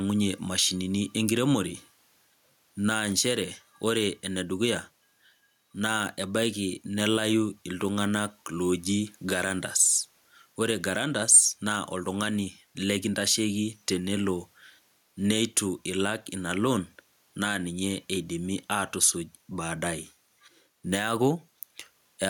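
Gain pumping throughout: the gain swings around 10 dB, pulling down under loud speech, likely a fast limiter reining in too much mic gain.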